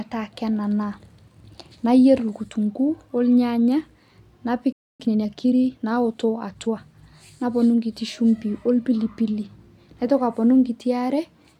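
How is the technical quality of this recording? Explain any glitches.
The speech is interrupted by two linked faults in quick succession: a gap in playback followed by a hurried stretch.

From 4.72 to 5.00 s a playback stall cuts the speech off mid-flow for about 270 ms. The likely cause is the player running short of buffered data or its thread being blocked. On a waveform this is a flat line; a spectrogram shows a blank vertical band.

From 5.00 to 6.80 s comes time-compressed catch-up: the player trims its backlog by removing short slices and cross-fading the joins, running about 1.15 times fast. Pitch stays normal, but the speech sounds rushed. A spectrogram shows squeezed syllables and small smeared seams.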